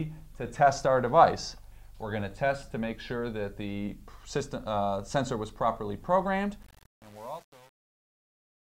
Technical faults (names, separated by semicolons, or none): truncation distortion on a fade